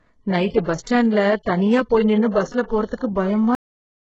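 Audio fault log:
Throughout: HE-AAC compression, likely the cause of the heavy damage across this speech. Nothing reaches above about 7.9 kHz, and the damage is severe enough to point to a very low bitrate, around 8 kbps. With so few bits, only the lower band is properly coded and the treble is rebuilt by spectral band replication, copying lower bands upward under a coarse envelope. Because the copied harmonics don't line up with the real ones, sibilants come out gritty, metallic or lispy.
0.64–0.67 s, 0.83–0.87 s and 2.95–3.01 s: pre-echo. Before each of these sharp onsets a brief hiss builds up, lasting 31 ms at the first two and 54 ms at the third. The codec spreads quantisation noise evenly across each transform block, so when an attack lands late in a block, noise scaled for the loud part leaks into the quiet moment ahead of it. Each attack therefore sounds softened and smeared rather than crisp.
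3.55 s: cut-off end. The audio stops abruptly mid-sound and drops straight to digital silence, with no natural decay, for the remainder of the clip. This happens when the final buffers are never written or played out, so whatever sound was in progress is truncated rather than allowed to finish.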